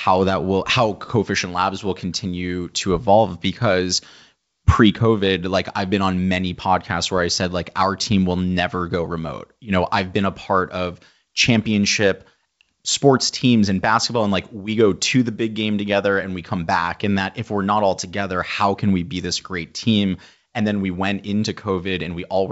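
No technical faults can be heard in this recording.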